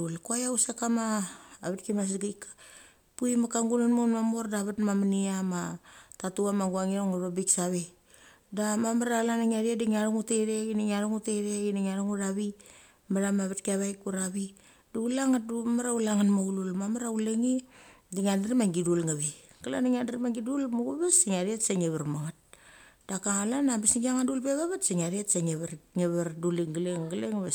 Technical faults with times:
none

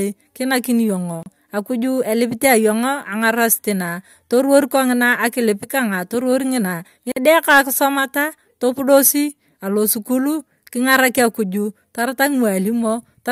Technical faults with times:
1.23-1.26 gap at a join of encoded pieces
7.12-7.16 gap at a join of encoded pieces

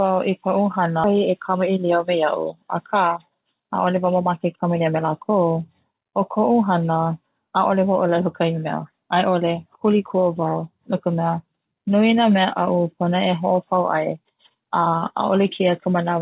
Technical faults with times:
1.04-1.06 skip ahead
1.14-5.04 jitter buffer speed-up

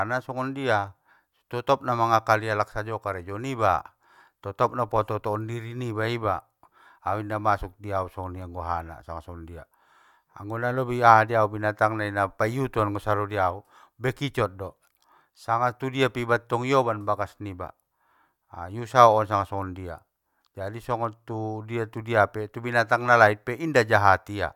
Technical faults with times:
none

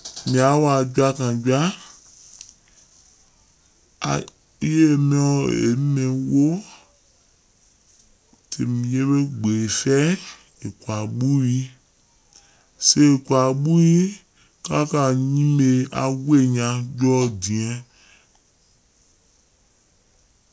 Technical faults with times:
0.00-20.52 wrong sample rate

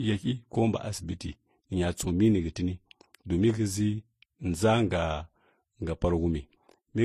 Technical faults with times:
0.00-7.04 transcoding between lossy codecs

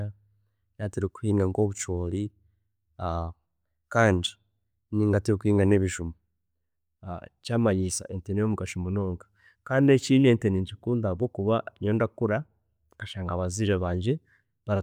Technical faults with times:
none

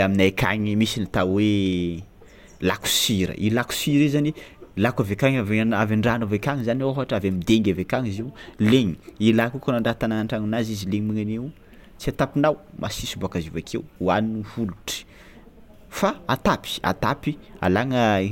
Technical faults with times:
none

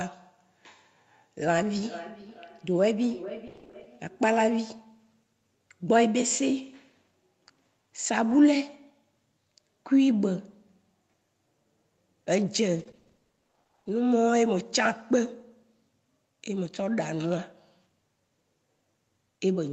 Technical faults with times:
1.80-4.31 feedback echo between two devices
3.47-3.87 repeated packet loss (robotic sound)
8.29-8.35 lost packet rebuilt from error correction
12.79-13.89 repeated packet loss (robotic sound)

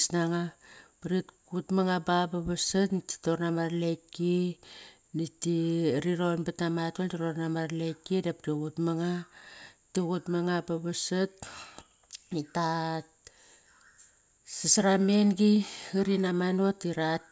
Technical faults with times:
none

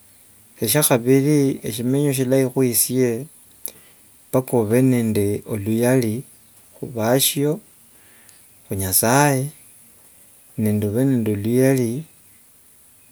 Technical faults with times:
none

